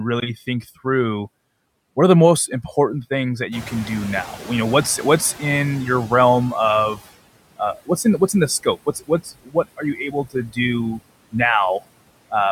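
The whole clip of speech carries noise suppressor artifacts. The suppressor pulls down whatever bands it reads as steady noise by about 21 dB, frame by frame, so the background ducks away in the gaps and swells back up under the talking.

Right after "most important things that", at 3.51 s, the room noise jumps by about 14 dB and ends up roughly 18 dB below the speech. That's a genuine change in the room's background, not a system fault, but it exposes the noise suppressor catching up. Its noise estimate lags behind the jump, so the louder noise comes through with only around 15 dB of reduction at first, then gradually sinks as the estimate adapts over about 3.5 s, settling by 7.01 s.

From 7.58 s to 8.34 s, just before "in the", there's speech cut by the noise suppressor. It mistook bits of speech for noise and dipped them by up to about 15 dB, around a fifth of a second in total. It happens again from 8.63 to 10.58 s, right after "in the", with dips up to about 17 dB adding up to roughly half a second. 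In both stretches, the parts that were turned down sound swallowed or faint.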